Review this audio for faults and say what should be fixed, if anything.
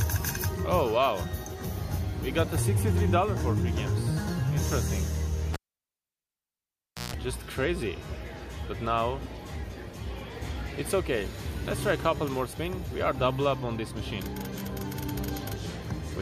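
A cable pulled and plugged in back in causes the fault at 5.53 s. A pop marks the break. The audio then drops to near silence for about 1.56 s. During the reconnection, a 60 Hz mains buzz lasts about 0.15 s. That happens while only the plug tip touches the socket and the ground contact is open. A second pop at 7.14 s marks the return of the sound. To prevent it, mute the channel or input before moving any live cable.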